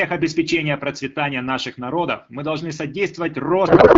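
Speech coded with AMR wideband (HD Voice) at 12.65 kbit/s, which fits its clear sound, collapses from 3.67 s to the end into garbled noise and warble that barely tracks the speech. This is a codec payload misread: octet-aligned AMR frames are being unpacked as bandwidth-efficient, so the decoder reads fields from the wrong bit positions.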